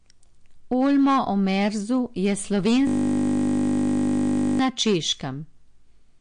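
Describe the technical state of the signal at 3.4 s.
At 3.4 s the sound is caught in a system hang loop running from 2.87 to 4.59 s. The computer stalled while the audio hardware kept replaying one 20 ms stretch of its ring buffer. That piece repeats many dozens of times. It is heard as a steady buzz at 50 Hz.

Hard clipping is also present here. The speech is driven about 9 dB past what the signal path can pass. Its peaks are sliced flat, a few percent of samples in all. The flat tops add high harmonics, heard as harsh crackle on loud sounds.

The signal is also band-limited. Nothing is present above 9.8 kHz, and the remaining detail sounds watery and swirly, with smeared attacks. This is likely MP3 compression at a low bitrate, around 48 kbps. The encoder dropped the treble and switched weak frequency components on and off between frames.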